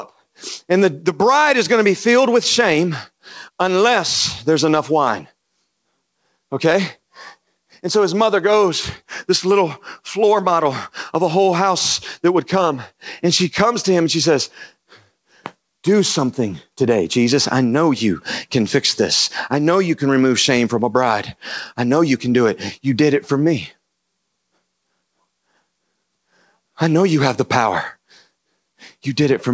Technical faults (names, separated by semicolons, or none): none